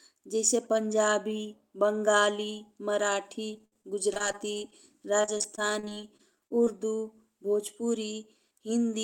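From 3.53 to 4.74 s and again from 5.22 to 6.68 s, the speech turns choppy and robotic: repeated packet loss, with each hole patched by stretching the previous sound. Roughly a fifth of each stretch is concealed, with gaps up to 62 ms in the first and 33 ms in the second. Unlike a single dropout, the holes keep coming in quick succession.

Overlapping the end of the second stretch, from 6.31 to 6.96 s, a jitter buffer slow-down repeats short pitch periods to rebuild its reserve, adding 64 ms and playing at about 91% speed. Sounds drag out while the pitch stays put, which separates it from a tape-style slowdown that would lower the pitch.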